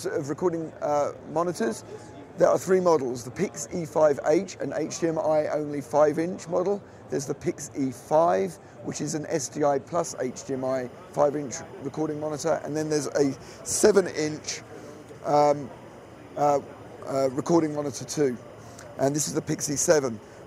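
From 9.99 s to the end, a faint, steady chirping warble sits well below the main sound. This is timecode bleed: linear timecode running at 25 frames per second leaks in, its square wave flipping between tones near 1 and 2 kHz.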